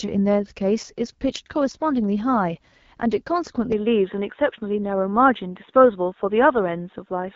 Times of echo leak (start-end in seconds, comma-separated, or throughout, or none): none